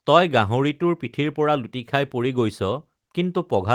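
No technical faults are audible.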